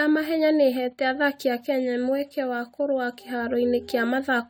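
Generation loss runs through the whole of this speech, most likely from the audio being put through AAC-LC at 64 kbit/s about four times over. Each re-encode quantises again on a shifted frame grid, so the damage stacks: the sound is swirly and hollow, consonant attacks are smeared, and the coding noise is worse than a single 64 kbit/s pass would leave. On a spectrogram this shows as flickering holes and blotchy high bands, with transients blurred in the waveform.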